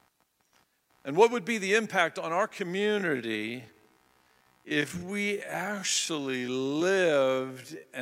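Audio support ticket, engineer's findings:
Computer activity noise, throughout: processor or graphics load shifting the shared ground into the audio path. Faint buzzing chirp pulsing at around 70 Hz, roughly 40 dB below the speech, rising and falling with machine activity rather than the talker.

Time-stretched section, 2.72 s to end: likely software stretching audio to a target length, repeating short pieces to hold pitch. Pace abruptly slows to 0.53x with pitch unchanged; speech drags from there.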